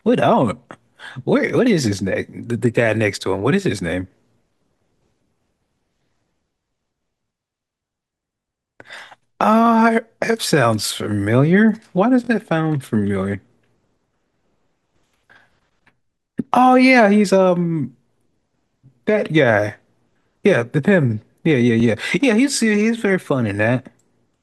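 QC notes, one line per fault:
1.49–1.52, 8.41–8.45, 9.66–9.69, 12.25–12.29 and 21.80–21.82 s: repeated buffer. A 21 ms slice, fitting a 1024-sample buffer, replays once, or twice at 8.41 and 12.25 s, giving a brief stutter-buzz with hard joins. Unlike a dropout, nothing goes silent or missing.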